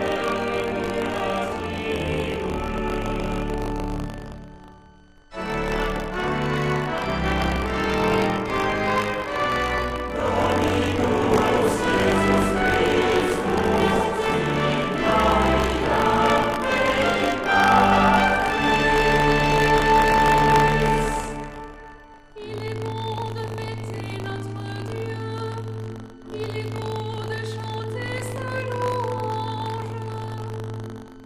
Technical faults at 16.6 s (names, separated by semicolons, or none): switching supply whistle; buffer tearing; MP2 compression